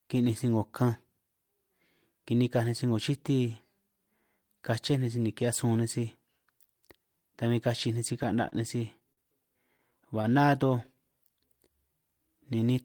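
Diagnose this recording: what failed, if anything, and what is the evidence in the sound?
Network stage, two short stalls from a late packet. At 8.49 s, just before "nej sij", sound is held for about 31 ms; at 9.13 s, right after "nej sij", for about 44 ms. The jitter buffer ran dry, the last sound was stretched until the packet arrived, and nothing was lost.

Scattered short gaps appear between 9.77 and 10.90 s: about seven brief ticks or smears, none longer than about 20 ms, totalling roughly 70 ms. Isolated packets went missing or arrived late, and each hole was patched by continuing the preceding sound.

A jitter buffer slow-down runs from 10.50 to 12.74 s. The audio plays at 94% speed with unchanged pitch, and sounds are drawn out. The receiver rebuilt its reserve by repeating pitch periods and pause fragments, adding 152 ms over the stretch.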